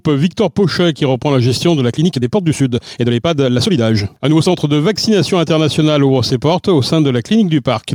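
From 1.85 to 4.57 s there is a time-stretched section: pace jumps to about 1.49 times speed with unchanged pitch, sounding rushed, likely from software dropping short segments.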